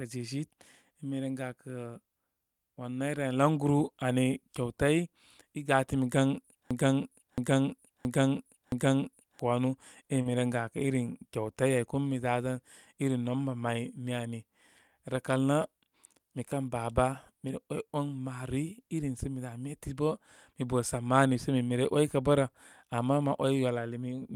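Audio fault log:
6.71–9.39 s, broken-record loop: A fragment about 0.67 s long plays four times back to back, each pass identical, for roughly 2.7 s. The sound that should have filled that stretch never arrives; the clip resumes after the last repeat with that material missing. The exact, seamless repetition likely comes from a stalled player or stream that kept re-sending the last block it held, rather than from anything in the recording itself.
10.21–10.27 s, short concealed packet loss: About 40 ms of audio failed to reach the decoder in time, and the receiver papered over the hole instead of leaving silence. It extended the preceding sound, carrying its pitch forward where it was voiced and filling with shaped noise where it was not, then cross-faded back into real audio. The result is a brief smear or wobble, and a short consonant in that spot can disappear.
10.25–10.27 s, lost packet rebuilt from error correction: At the tail of the concealed stretch, about 20 ms, which fits a single lost frame, was restored from the low-bitrate redundant copy carried in the following packet, as Opus in-band error correction allows. 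No gap is heard there, but that sliver sounds coarser and noisier than its surroundings because the backup copy encodes far less detail than the original frame.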